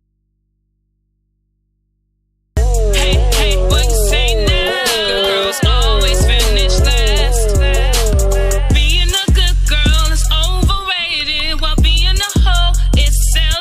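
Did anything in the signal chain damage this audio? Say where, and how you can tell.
Yes: an audio dropout to a faint residue runs from the start to 2.57 s, leaving only mains hum far below the signal, likely a broken analogue input connection.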